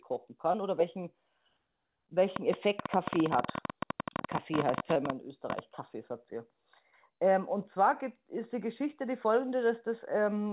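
At 0.52 to 0.56 s there is a short concealed packet loss. About 20 ms of the speech never arrived in time, and the receiver patched the gap by extending the preceding sound before blending back into the real signal. It is heard as a brief smear or wobble rather than a sharp tick. Unlike a click, it replaces a sliver of the speech instead of sitting on top of it.

From 2.36 to 5.60 s a train of clicks runs across the audio. There are about forty pulses at roughly 13.3 per second, unevenly spaced, and they peak about 15 dB above the speech. Each has much the same shape, and they keep ticking through pauses. That repetition and persistence sets them apart from one-off dropouts. The likely cause is interference from nearby equipment or a faulty connection or power supply.

At 4.94 to 4.97 s, inside that click train, a second short concealed packet loss of about 20 ms produces another brief smear. 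All of it is heard within the G.711 call band, which stops at 4 kHz.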